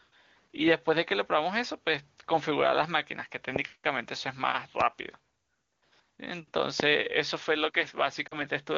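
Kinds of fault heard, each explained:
loud pop: A single sharp pop cuts in over the speech at 3.56 s and again at 6.80 s, each lasting about 20 ms and standing roughly 15 dB and 20 dB above the speech, which carries on unbroken beneath them. The likely cause is a sudden voltage step or spike, from a connector being disturbed, a switch, a static discharge or a driver glitch, which the following circuits shaped into a short, hard pulse.
lost AMR speech frames: Near 8.28 s the speech briefly drops to near silence for about 40 ms, recovering by 8.42 s. That gap fits two consecutive 20 ms frames lost to radio errors. The AMR wideband decoder, otherwise coding cleanly at 23.85 kbit/s, filled the hole by repeating the last good pitch and vocal tract settings with falling gain, so the sound drops to near silence within the two frames before the following frames arrive intact.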